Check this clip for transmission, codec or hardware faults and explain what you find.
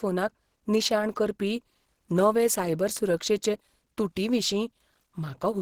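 One codec fault is present. Opus compression, throughout: the speech sounds muffled and hoarse, likely from Opus dropping into its hybrid speech mode at a low rate, which fits about 16 kbps.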